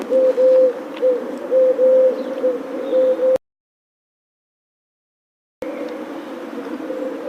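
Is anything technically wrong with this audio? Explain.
Yes, there's an audio dropout to silence from 3.36 s to 5.62 s. The sound cuts off mid-flow into dead digital silence, no room tone at all, for about 2.26 s. That's likely the input going missing while the recorder kept writing zeros, so whatever happened there is lost.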